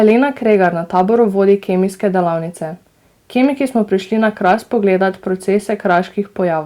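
Hard clipping flattens the speech peaks at 0.03–0.13 s, 0.51–1.01 s, 1.49–1.53 s, 4.46–4.54 s and 5.91–5.98 s. The loudest moments exceed what the signal path can pass by about 1 to 3 dB, so their tops are sliced off square, adding high harmonics heard as brief crackle on those peaks. Unlike soft saturation or a limiter, the onset is abrupt and edgy rather than rounded, and quieter passages stay untouched.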